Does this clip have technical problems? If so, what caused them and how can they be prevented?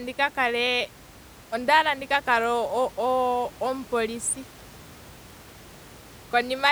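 No, the speech signal shows no technical faults, and the faint room noise, which sits about 23 dB below the speech, belongs to the recording space rather than to the system.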